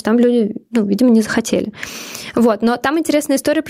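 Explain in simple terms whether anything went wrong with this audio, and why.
Something did go wrong, and it lasts the whole clip. The fault is gain pumping. The level keeps being pulled up and down. The swing is large. Loud and soft parts end up too close in level, so the speech sounds squashed. The likely cause is a microphone level set far too high, with a fast limiter or compressor pulling it back down on every loud sound.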